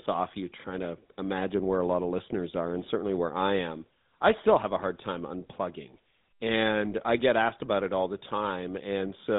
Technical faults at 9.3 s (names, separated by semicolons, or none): GSM full-rate codec